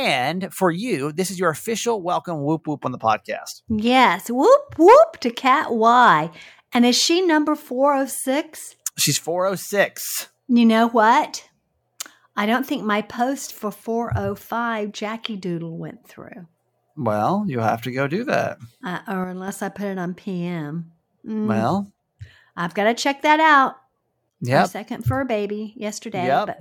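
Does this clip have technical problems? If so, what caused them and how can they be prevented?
Yes. At 19.24 to 19.48 s, just before "I put it on", the speech suddenly drops by about 6 dB, and the background noise falls by the same amount at the same instant. This is a sudden gain jump. The likely cause is a digital gain setting, or a one-bit shift that exactly halves the amplitude, applied between one sample and the next instead of being faded in. Ramping every gain change over a few tens of milliseconds prevents it.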